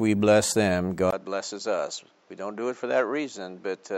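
At 1.1 s the speech cuts out for about 20 ms, then returns duller and about 5 dB quieter, with nothing above 7.6 kHz and a new noise floor some 35 dB down. That's most likely the input switched to a poorer device, and it stays that way to the end.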